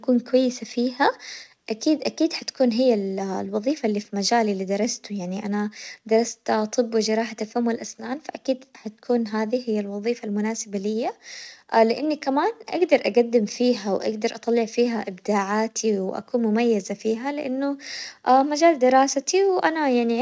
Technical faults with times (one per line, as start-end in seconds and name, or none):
none